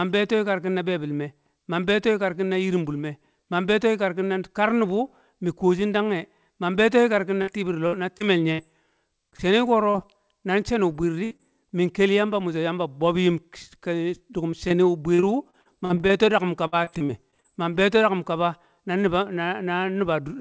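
From 7.42 to 8.60 s there is repeated packet loss (robotic sound). Four gaps, the longest 62 ms, are patched by extending the previous sound, so about a sixth of the stretch is synthetic. The quick succession of patches gives a choppy quality, unlike a single isolated dropout.

Short concealed packet losses follow at 9.30–9.34, 9.36–9.40, 9.90–9.96 and 10.92–10.96 s, each 20 to 40 ms of missing audio filled in by the receiver. Each is a brief smear or wobble where a consonant can disappear. Because they are single and brief, the sound does not turn robotic.

At 11.24–11.33 s a burst of packet loss removes about 60 ms. The last sound is held and fades before the speech resumes further on. It is longer and more audibly sustained than the short concealed loss that follows at 11.37–11.41 s.

From 14.51 to 17.46 s repeated packet loss returns over nearly 3 s. Sixteen gaps, none longer than 51 ms, again fill about a sixth of the span, producing choppy sound with pieces missing. 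Through the G.722 call path, nothing above 8 kHz is present.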